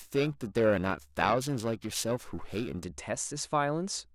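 From the start to about 2.84 s the speech carries periodic clock jitter. Interference wobbling the converter clock at around 1 kHz places sidebands that far above and below each component, giving a harsh metallic edge. Unlike added noise or hum, it disappears in pauses.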